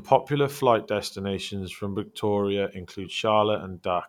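No technical faults are audible anywhere in the speech recording.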